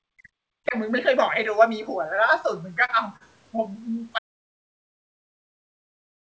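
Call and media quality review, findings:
Speech suppressed in double talk, 0.00 to 0.76 s: the voice ducks hard, down about 40 dB at worst, across most of that opening stretch. Likely the echo canceller hearing far-end talk over it and squashing both sides instead of just the echo.

Repeated stalls (stutter), 2.68 to 3.80 s: six little hitches where the jitter buffer ran dry and concealment stretched the last sound, the longest 39 ms and 107 ms filled in total. Nothing actually lost, just a dragging, stuttery feel for about a second.

Audio dropout to silence, 4.19 s to the end: sound cuts off mid-flow into silence, no room tone at all, and never comes back. Likely the input went away, via a dropped device, broken link or stray mute, while the recorder kept writing.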